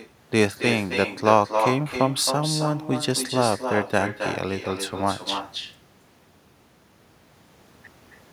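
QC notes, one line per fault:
Throughout: echo with no canceller. Every phrase is trailed by a thinner copy about 7 dB quieter, arriving roughly 300 ms later. The far end's loudspeaker is feeding its microphone, and with nothing cancelling that pickup, the sound returns after the network round trip.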